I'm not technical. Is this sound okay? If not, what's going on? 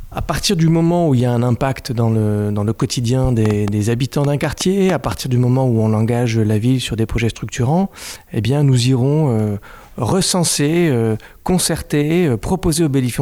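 No. From 3.45 to 5.13 s there's a train of clicks: about ten uneven ticks, nearly five per second, likely from interference by nearby equipment.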